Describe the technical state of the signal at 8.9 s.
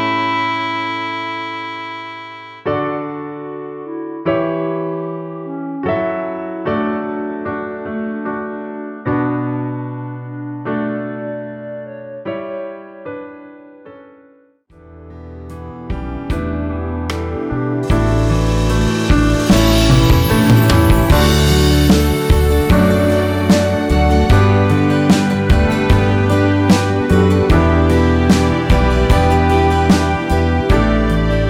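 At 8.9 s the signal is intact, with no audible fault at that point.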